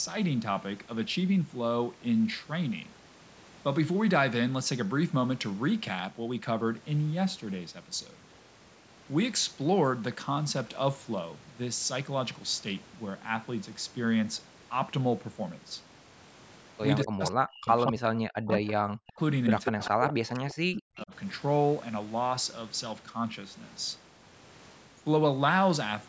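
Speech with a likely echo leak: delayed copies about 191 ms behind the talker at 16.98–17.31, 18.67–18.71, 19.64–20.13 and 20.49–20.54 s, showing as duplicated harmonic traces on a spectrogram. Speech is likely suppressed in double talk at 17.04–18.68, 19.01–19.20 and 19.68–21.13 s, where the waveform collapses by up to about 40 dB.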